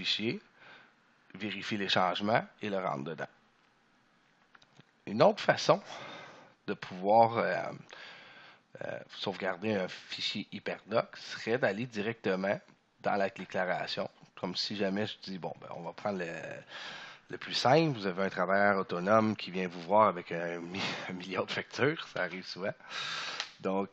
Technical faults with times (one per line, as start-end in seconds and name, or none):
7.54 damaged data in a compressed stream